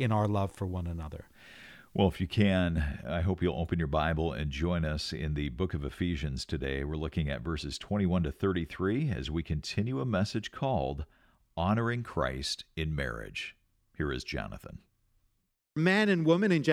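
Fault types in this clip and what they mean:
No technical faults can be heard in this recording.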